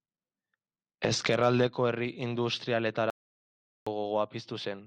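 At 3.10 s the speech drops out to dead silence, with no room tone at all, and comes back mid-flow at 3.87 s, so about 0.76 s is simply gone. That's an audio dropout to silence, likely a lost input or stray mute while recording carried on.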